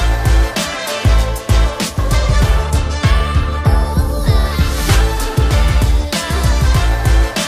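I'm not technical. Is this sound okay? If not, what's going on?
Yes, this sound is okay; nothing is going on that needs fixing.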